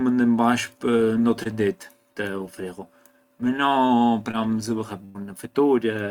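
Short concealed packet loss occurs at 1.43 to 1.47 s and again at 4.31 to 4.35 s. Each time, about 20 ms of speech arrived too late and the decoder extended the preceding sound to cover it. Each is heard as a quick smear or wobble, and on a spectrogram as a brief, overly smooth patch where the harmonics flatten before rejoining the real signal.

A burst of packet loss follows at 5.05 to 5.17 s. Roughly 100 ms went missing, and the receiver stretched the last sound across it while fading it down. The result is a filled gap that dies away before speech resumes further along. The waveform shows a decaying, repetitive envelope, and the spectrogram shows frozen, smeared bands.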